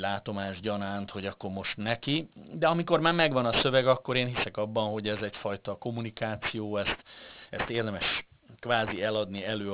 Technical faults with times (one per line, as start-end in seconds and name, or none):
0.00-9.73 aliasing